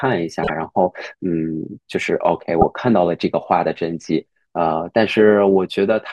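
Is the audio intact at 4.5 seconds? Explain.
Yes, the audio is intact at 4.5 seconds, with no fault audible at that moment.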